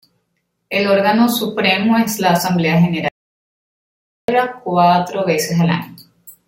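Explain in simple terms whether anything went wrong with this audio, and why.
At 3.08 seconds the speech suddenly stops dead, and for about 1.2 seconds, until 4.28 seconds, there is total silence, not even the faint background hiss of the room. Then the speech picks up again mid-flow. This is an audio dropout to silence. The likely cause is that the microphone signal was briefly lost, through a loose connection or an accidental mute, while the recording kept running and simply stored nothing. Whatever was said in that gap is gone.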